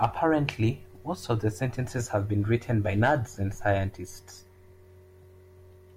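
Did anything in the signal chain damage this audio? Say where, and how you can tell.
No, nothing in the chain damaged it.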